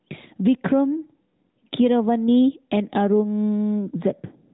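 Across the whole speech clip there is gain pumping. The level swings by around 10 dB, so quiet and loud passages sit unnaturally close together and the delivery sounds squashed. The likely cause is input gain set far too high with a fast limiter or compressor clamping down on every peak. All of this plays through a narrowband mobile channel with nothing above about 3.8 kHz.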